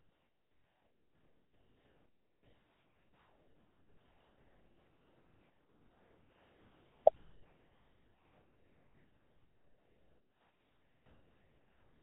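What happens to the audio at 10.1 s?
At 10.1 s the speech is gone, replaced by steady comfort noise from 7.16 s to the end. That's likely sound dropped by the voice detector, which took speech for background and stopped sending. Under that is overdone noise removal running throughout, with bands gouged out so the background twinkles.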